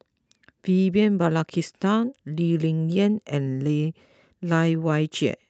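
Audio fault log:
No faults logged; the speech arrives over the WebRTC call path through Opus at 32 kbps, with its band limited to 8 kHz as that codec setting gives.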